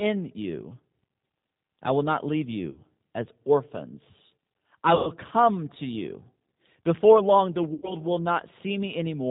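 The whole clip runs through G.729 at 8 kbit/s, and the codec damage is plain: everything above 4 kHz is gone, and the speech has that rough, slightly synthetic edge from being rebuilt out of a vocal tract filter, pitch predictor and a few pulses per frame.

Then there's VoIP packet loss concealed by the speech codec, three times. At 2.70 to 2.80 s, after "I will not leave", about 60 ms goes missing. At 4.95 to 5.10 s, after "as orphans I", roughly 120 ms is lost. At 7.74 to 7.95 s, after "long the", about 90 ms drops out. Each time the decoder stretches the last sound into a fading buzzy tone or coloured noise, and the voice stays weak for a moment afterwards.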